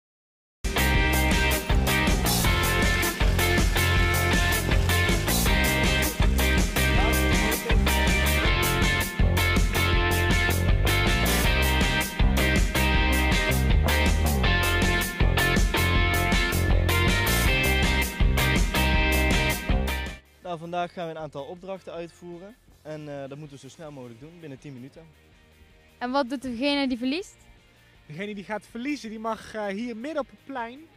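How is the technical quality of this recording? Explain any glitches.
The recording has one clear glitch, a cut-off start. From 0.0 to 0.64 s there is nothing but digital silence, and at about 0.65 s the audio appears abruptly, already partway through a sound, with no natural attack or fade-in. The capture or stream evidently began late, so the opening of that sound was never recorded. What remains jumps straight from dead silence to full level instead of building up.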